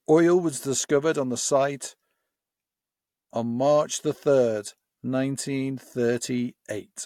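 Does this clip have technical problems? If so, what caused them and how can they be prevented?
No, there are no technical problems to hear in this speech clip. With nothing gone wrong, there is no cause to trace and nothing that needs preventing.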